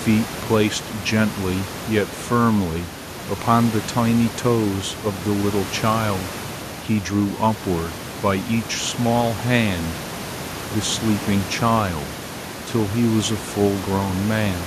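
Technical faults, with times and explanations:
No technical faults turn up anywhere in this speech, and the room noise sitting about 14 dB beneath it is simply the space the microphone was in.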